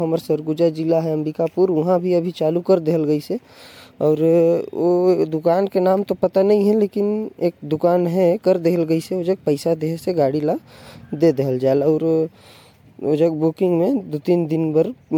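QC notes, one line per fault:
Throughout, generation loss: swirly, smeared, hollow speech with blurred onsets, likely from about four MP3 passes near 96 kbit/s; spectrogram shows patchy holes and smeared transients.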